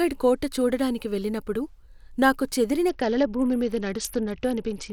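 At 2.89 s, just after "నాకు చెదిరిన", the Bluetooth link runs into a SBC bit pool drop. The sending device cuts the encoder's bit budget, with a sound that fits a bit pool falling from around 28 to 8 and a rate near 72 kbps. The highest sub-bands get almost no bits and the rest are quantised coarsely, so from there to the end the speech turns dull and muffled, with a gritty, grainy noise riding underneath.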